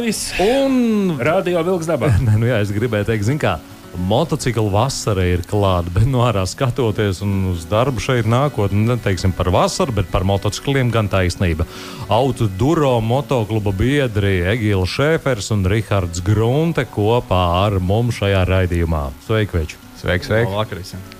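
Across the whole clip, the audio carries a grainy, gritty distortion that rises and falls with the sound itself. It likely comes from low bit depth without dither: roughly 7 bits, rounded, leaving error around 30 dB below the signal.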